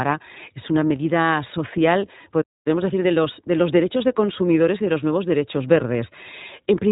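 From the start, the whole clip carries the sound of the iLBC codec. Everything above about 3.8 kHz is gone, so the speech has that boxed-in telephone quality, and the damage is plainly audible: a rough, slightly synthetic edge on every syllable. That texture comes from each short frame's excitation being coded on its own, with nothing carried over from the frame before, and it fits the 20 ms frames of iLBC's 15.2 kbps mode.

Right after "es una medida social", at 2.41 s, the audio just drops out in mid-flow and stays silent until 2.67 s, roughly a quarter of a second of nothing. That's a playback stall. The likely cause is the player running dry of data, or its thread getting blocked, so there was nothing to send to the output until it recovered.

Once the audio comes back at 2.67 s, it's hurried until about 5.11 s. That's time-compressed catch-up: the player is working through the backlog the stall left behind by snipping out small pieces and cross-fading over the joins. 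Here it runs at about 1.1 times normal speed, with the pitch unchanged, before the pace settles back to normal.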